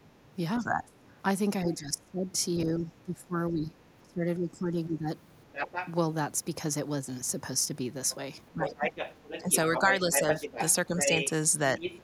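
From 0.03 to 5.08 s the speech sinks in and out by up to about 25 dB, likely speech suppressed in double talk as the echo canceller ducks everything. The waveform shows deep gouges. At 0.56 to 0.61 s a faint scrap, about 20 dB down, is the other side's voice leaking through, likely from residual loudspeaker echo. It returns louder, about 5 dB under the speech, at 5.52 to 5.93 s and from 8.1 to 12.02 s, as a second overlapping harmonic pattern on the spectrogram. Within that stretch, shorter suppression dips, likely from the same double-talk ducking, hit at 8.52 to 8.77 s (about 15 dB), 9.42 to 10.27 s and 10.86 to 11.07 s (about 5 dB each).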